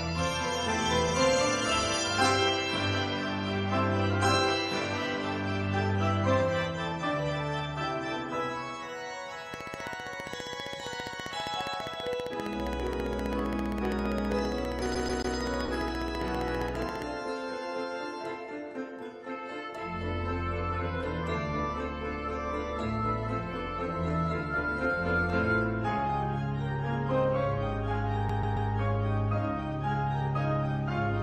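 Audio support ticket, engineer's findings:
Train of clicks, 9.54–17.03 s. Regular ticking at 15 per second, about a hundred pulses, peaks roughly 10 dB above the programme and audible in pauses too. Identical pulse shape at a fixed rate; likely external interference or an interface dropping and recovering on a steady cycle.

CD stuck on one turn, 14.95–15.36 s. Fast even stutter: the same 0.14 s segment plays three times, with a short mute at each jump. Disc-read fault, where a scratch throws the pickup back one track at the same point on every revolution.

CD stuck on one turn, 28.29–28.70 s. Same signature: 0.14 s loop, three repeats, mute at each jump. Same skip mechanism recurring later in the audio.

Short concealed packet loss, 15.66–15.70 s. Brief smear just after the first skip, inside the click train. About 20 ms of audio never arrived in time. The receiver filled the gap by extending the preceding sound, then crossfaded back into the real stream.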